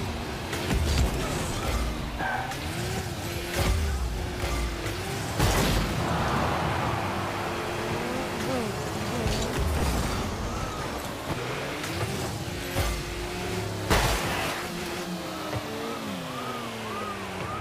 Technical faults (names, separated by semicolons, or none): none